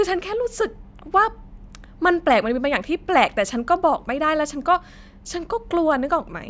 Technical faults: none

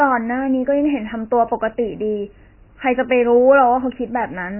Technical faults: MP3 compression

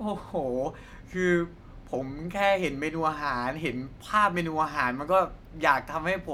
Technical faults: none

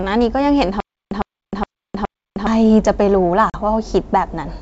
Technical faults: stutter with silent gaps; packet loss on an ADPCM call

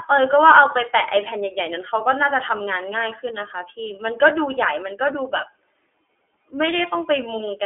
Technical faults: iLBC codec

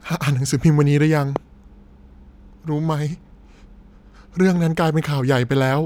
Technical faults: loud pop

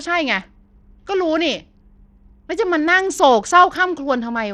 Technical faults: Bluetooth SBC compression

